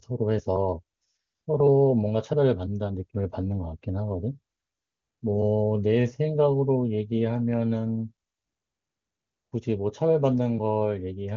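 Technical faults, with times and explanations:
Nothing in this speech clip stands out as a technical fault, and it all comes across as you'd expect from an AMR wideband (HD Voice) call path running at one of its higher rates.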